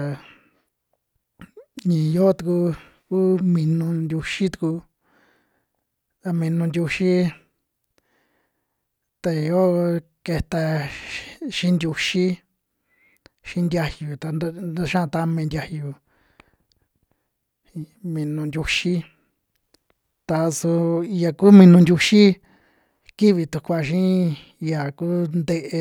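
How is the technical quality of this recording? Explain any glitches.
Nothing stood out on listening to this speech recording that would count as a technical glitch.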